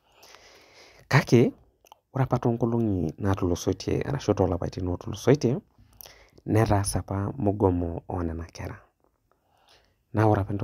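No technical faults can be heard anywhere in this recording. There is nothing at any point in the speech that calls for comment.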